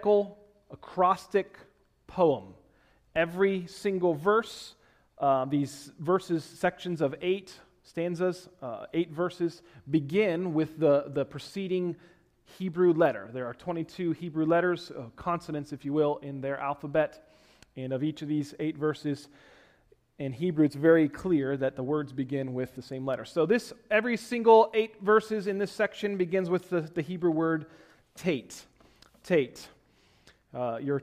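No technical faults can be heard at any point in the clip.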